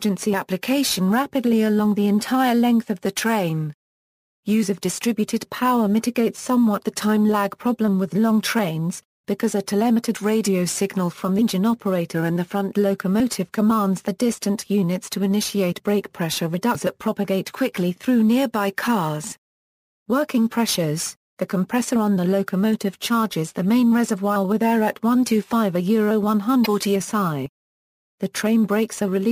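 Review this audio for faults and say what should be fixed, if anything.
Damaged data in a compressed stream at 11.38–11.42 s, 16.71–16.76 s and 26.62–26.67 s: each is a brief disruption lasting roughly 40 ms, where corrupted frames make the decoder lose sync and hunt for the next valid header. Use checksummed transport and error-resilient framing.

Dropped buffer (overrun) at 13.2 s, 19.32 s and 27.46 s: each is a small jump ahead, about 20 ms of sound missing at the first two points and about 40 ms at the third, likely because capture fell behind and unread samples were overwritten. Enlarge buffers and raise capture-thread priority.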